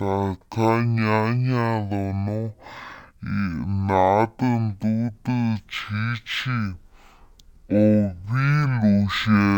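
Speech that drags at half speed and sits a full octave low from start to finish, with a faint mirrored copy in the upper spectrum: stereo read as mono, where interleaved left and right samples were played back sequentially as one channel, doubling the length.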